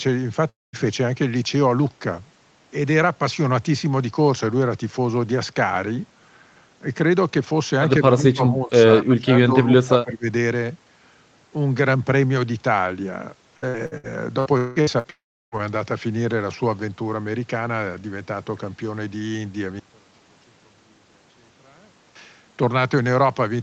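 At 0.49 to 0.76 s a long network dropout is the likely cause: the last sound is stretched into a fading buzz, then about 0.2 s of silence appears as a blank spectrogram column before the audio resumes with a piece missing.

From 8.09 to 8.74 s and again from 9.00 to 10.27 s, the voice dips by roughly 15 and then 20 dB. This is likely speech suppressed in double talk, with the echo canceller ducking the talker. The waveform envelope shrinks.

Between 13.57 and 15.07 s, repeated packet loss gives a choppy, robotic sound. A run of short holes, the longest about 0.18 s, is patched with repeated fragments. These show as smeared, striped blocks in the spectrogram.

Immediately after, from 15.10 to 15.55 s, a second long network dropout is the likely cause. A brief fading tail leads into roughly 0.33 s of flat silence, and the waveform flattens out.

From 19.79 to 22.15 s, one channel inverted is the likely cause. 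In mono the centred speech cancels, falling about 31 dB, so the waveform collapses to a thin residue and the spectrogram nearly empties. Throughout, the call path's Opus coding limits content to 8 kHz.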